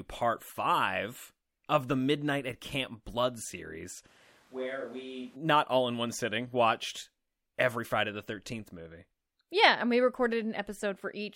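From 4.08 to 5.35 s the speech turns abruptly roomy and hollow, with thin bass. The level falls about 10 dB. Room noise sits around 25 dB below it. This is a switch to a distant microphone, likely after the close mic dropped out. Close sound returns before "all in one sitting".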